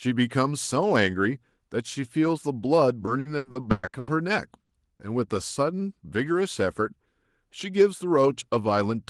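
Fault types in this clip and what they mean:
Repeated packet loss (robotic sound): From 3.05 to 4.09 s, nine gaps up to 120 ms each were patched by extending prior audio, nearly half the span. The speech turns choppy; a spectrogram shows smeared, repeated harmonic stretches alternating with genuine frames.
Burst of packet loss: At 4.63 to 4.71 s, about 60 ms went missing and was filled by carrying the last sound forward while fading it. It is heard as a held buzz or hiss, seen as a flat, decaying band before speech resumes abruptly.
Short concealed packet loss: Around 4.97 to 5.01 s, roughly 20 ms was replaced by a synthesized continuation blended back into real audio. It comes across as a brief smear or wobble, visible as a tiny discontinuity or blurred slice in the waveform and spectrogram.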